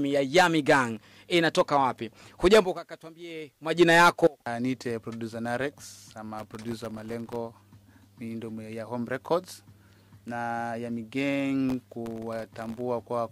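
Processor overload crackle appears three times: 0.97 to 1.23 s, 6.38 to 7.36 s, and 11.69 to 12.81 s. The processor missed its deadlines for very short audio buffers, each under a millisecond. Every miss dropped in a tiny hard-edged gap of silence. Many such gaps in quick succession make a burst of gritty crackle over the sound. The first burst is brief. The second and third each last about a second and stop once the load clears.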